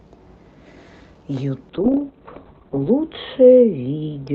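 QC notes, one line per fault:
1.7 to 4.34 s, call bitrate drop: the audio turns rough and watery, and its upper limit falls from 8 kHz to 4 kHz, muffling it. The worst stretch lasts 1.21 s and fits an encoder cut from around 32 kbps to about 6 kbps, with no recovery before the end.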